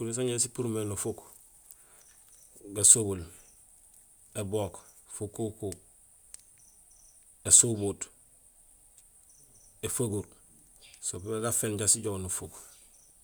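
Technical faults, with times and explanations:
Nothing stood out on listening to this speech recording.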